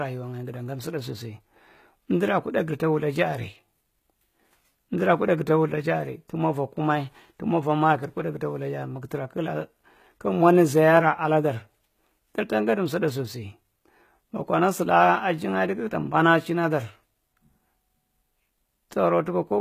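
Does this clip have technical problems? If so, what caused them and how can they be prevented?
Yes. Plainly audible HE-AAC compression damage runs through the whole speech clip. Nothing is heard above 14.9 kHz. The treble sounds rebuilt, with a gritty, lispy edge on s sounds. The likely cause is spectral band replication: the top octaves are copied up from lower bands rather than coded, which fits a bitrate around 20 kbps. Encoding at a higher bitrate, or with plain AAC, prevents it.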